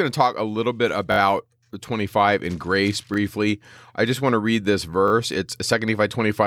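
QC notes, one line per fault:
1.12–1.18 s, 3.14–3.16 s, 5.08–5.12 s: repeated buffer. Brief stutters where a tiny slice of the speech sounds three, one and two extra times with hard joins. That fits a 20 ms buffer replayed when new audio arrived late, with essentially nothing lost.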